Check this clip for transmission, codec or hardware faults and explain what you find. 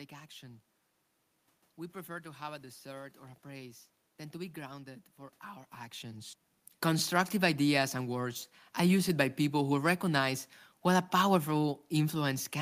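No transmission, codec or hardware faults are audible; the background is room noise in the recording, and the level change around five and a half seconds is the talker shifting position relative to the microphone.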